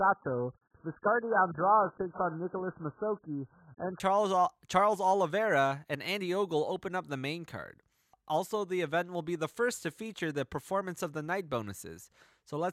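Speech, opening on an adaptive stream starting at a low bitrate. Until 4.0 s nothing sounds above 1.8 kHz and artefacts are strong, which fits roughly 8 kbit/s AAC. Quality then jumps up without a gap.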